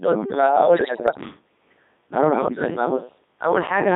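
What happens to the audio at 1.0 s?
At 1.0 s the speech falls inside a burst of bit errors on digital voice radio, running from 0.75 to 1.20 s. Flipped bits, at a rate of a few percent, corrupt the parameters of 19 frames. Those bits set pitch, level, voicing and spectral shape, so one bad bit reshapes a whole frame. The synthetic voice jumps in pitch and loudness. It changes tone colour abruptly and breaks into warbling, bleepy gibberish.

Underneath, the whole clip carries the Codec 2 vocoder sound. It runs at 3.2 kbit/s, and the damage is heavy. Only pitch, voicing, energy and a spectral envelope are sent. The decoder rebuilds speech from sine waves, so the original waveform is gone. The result is robotic and buzzy. It sits in a narrow band from 200 Hz to 3.7 kHz, thin at both ends.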